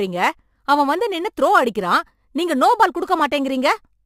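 Speech with crude rate conversion throughout: a gritty, inharmonic fizz about 25 dB down that follows loud, bright sounds, consistent with 44.1 kHz audio repeating samples to reach 48 kHz. Steady hiss would not track the speech this way.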